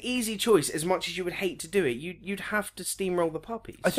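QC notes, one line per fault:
No faults found.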